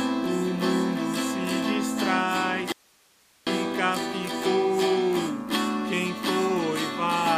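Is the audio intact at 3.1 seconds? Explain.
No. At 3.1 seconds the sound is in an audio dropout to a faint residue. It runs from 2.72 to 3.47 s, so about 0.75 s of signal is missing. The sound cuts off abruptly and returns just as suddenly. Only hiss remains in the gap, about 35 dB below the normal level. The likely cause is a brief loss of the wanted signal while the path after the break stayed live, passing its own noise.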